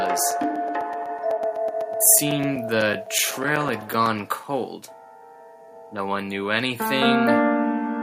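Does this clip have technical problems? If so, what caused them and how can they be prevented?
Yes: periodic USB or driver dropouts from 0.06 to 4.44 s. Every 0.125 s, a few milliseconds drop to silence, heard as about 40 evenly spaced ticks (random clicks would be irregular). Prevent them by stopping background tasks that poll the USB bus, and by using a larger audio buffer.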